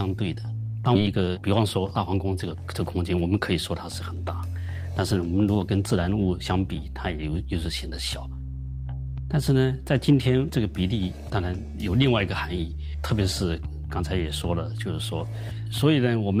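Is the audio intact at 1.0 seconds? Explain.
No. A skip ahead falls just before that point, between 0.95 and 0.97 s. Roughly 0.7 s of audio is lost and the timeline lurches forward by about that much, as if material that had been lost in transit or discarded by an overflowing jitter buffer was simply stepped over. The two sides meet with no gap in between, so the sound jumps abruptly mid-flow. Unlike a dropout, there is no silence or fill. Content is missing, but playback continues without a pause.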